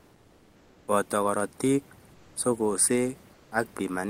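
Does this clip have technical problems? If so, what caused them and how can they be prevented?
Yes. Comfort noise in place of the background appears from 0.0 to 0.87 s, 2.13 to 2.35 s and 3.33 to 3.51 s, likely from discontinuous transmission such as Opus DTX. During these pauses the real room background gives way to steady, featureless synthetic noise about 1 to 3 dB quieter. Disabling DTX on the sending side prevents it.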